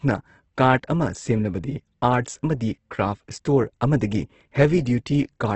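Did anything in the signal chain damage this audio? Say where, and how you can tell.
Yes, at the codec stage: the speech sounds rough and grainy throughout, with nothing above 8.1 kHz, which points to heavy Opus compression, likely in CELT mode near 12 kbps. Band energies are kept and noise-filled, so it turns grainy instead of swirling like MP3.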